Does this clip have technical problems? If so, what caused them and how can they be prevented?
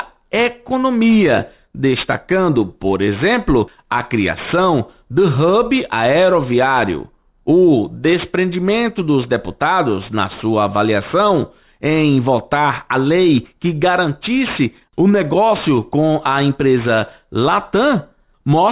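Yes. Aliasing runs through the whole clip: high-frequency content folds back around 4 kHz into gritty, unrelated tones roughly 20 dB below the signal, which fits a downsample to 8 kHz without anti-alias filtering. Prevent it by low-pass filtering below the new Nyquist frequency before resampling.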